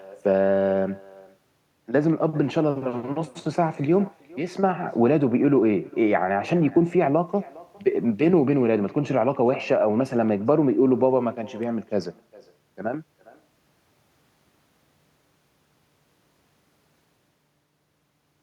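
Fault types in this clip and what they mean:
Echo with no canceller: the far end is playing the call through a loudspeaker, its microphone picks that playback up, and nothing subtracts it, so the speech returns after the network round trip. Across the whole clip each phrase is trailed, roughly 0.4 s later, by a faint, thin copy about 24 dB down. Unlike room reverberation, which smears continuously from the source, this is a distinct delayed repeat.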